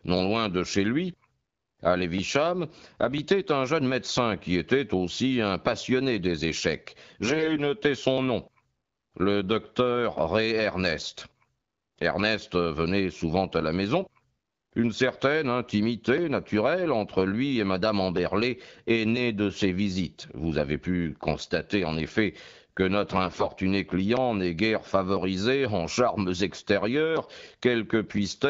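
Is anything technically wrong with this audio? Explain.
Yes. AMR bit errors appear at 7.25–7.61 s, 14.51–14.57 s and 23.24–23.48 s in the wideband (HD Voice) speech. Flipped low-protection bits misplace excitation pulses and corrupt gain and spectral values, so pitch and level hold but the sound turns hoarse, scratchy and gargly.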